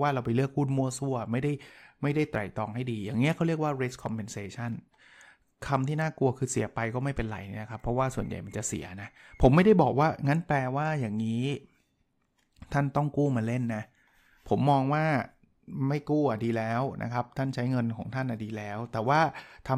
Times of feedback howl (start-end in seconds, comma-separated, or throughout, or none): none